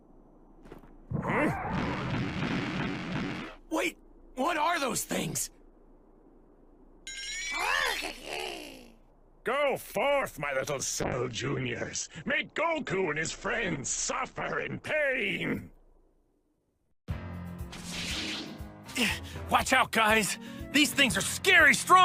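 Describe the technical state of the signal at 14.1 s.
At 14.1 s the signal is inside a call bitrate drop running from 11.02 to 16.79 s. The encoder coarsened as its bit budget collapsed, which fits a fall from 64 to 10 kbps. Bandwidth narrows from 20 kHz to 8 kHz, so the sound turns muffled and rough.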